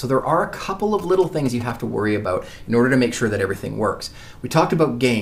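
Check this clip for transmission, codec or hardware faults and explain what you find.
One fault is present, GSM signalling bursts, from 0.99 s to 1.71 s. A nearby 2G phone exchanging short signalling bursts is rectified by the audio circuitry, producing a galloping pattern of ticks and 217 Hz buzzes, roughly 15 dB below the main sound.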